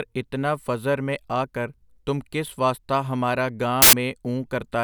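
A reader assembling each sample from the wrong bytes, misaligned or swapped, turns the low-order bits into the loudest part of every value. Just after "ਤੁਮ ਕਿਸ ਵਾਸਤਾ ਹਮਾਰਾ", from 3.82 to 3.93 s, the speech is replaced by a burst of loud, harsh broadband noise.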